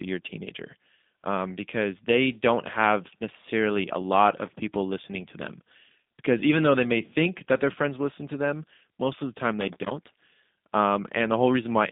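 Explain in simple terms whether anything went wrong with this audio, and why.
The speech passed through the G.729 codec, a phone-call compressor that doesn't send the actual sound. It sends a rough description: the shape of the mouth and throat, the pitch, and a few pulses every few thousandths of a second. The far end rebuilds the voice from that. From start to finish, nothing above about 3.8 kHz gets through, so the voice sounds narrow and muffled, with a slightly rough, artificial edge.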